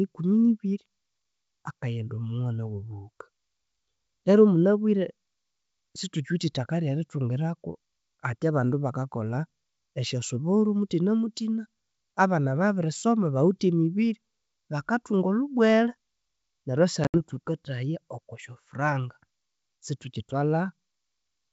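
From 17.04 to 17.15 s, sharp-edged silent gaps (about 80 ms in all, longest run 70 ms) break the speech, which then resumes slightly roughened on "thukathahaya okosyofuranga". This is packet loss on an ADPCM call. Silence replaced a handful of lost packets, leaving the G.722 decoder's predictor and step size out of step with the sender's until they re-converged.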